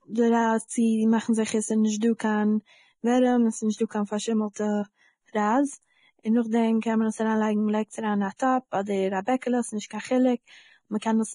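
From start to finish the speech carries the coarse, grainy sound of heavy lossy coding, and the likely cause is low-quality Vorbis compression at a rate consistent with roughly 27 kbps. Nothing is present above 10.6 kHz, and the remaining treble is reduced to noise of about the same energy as the detail it replaces. The result is hiss and roughened tone. A plain low-pass filter would dull the sound without adding that grit.

Pre-echo appears at 2.00 s, just before "קיין ווערעם", and again from 4.53 to 4.56 s, right after "נישטא קיין". It recurs at 8.37 to 8.39 s, 9.87 to 9.90 s and 10.99 to 11.02 s. Each time, quantisation noise sized for a sharp onset spreads back across its coding block, so a hiss of 18 to 36 ms arrives before the attack and the attack itself is smeared. Reverb or echo would trail after the attack rather than lead it.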